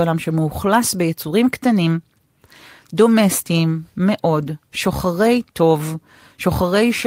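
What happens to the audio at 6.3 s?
Nothing goes wrong at 6.3 s; the speech runs on intact through that moment, with no dropout, click or distortion.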